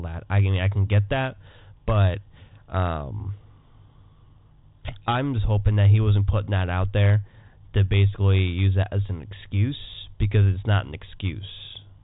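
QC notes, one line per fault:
No fault to log for this speech clip.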